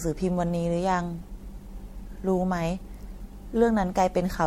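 Speech throughout, swirly and hollow with smeared consonants and nothing above 16.5 kHz, likely generation loss from about four passes through MP3 at what sounds like 64 kbit/s.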